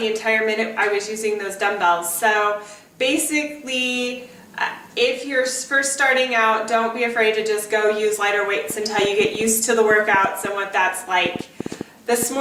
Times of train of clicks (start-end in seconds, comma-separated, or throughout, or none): 8.70-12.24